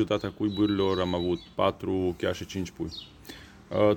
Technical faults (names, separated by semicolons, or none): none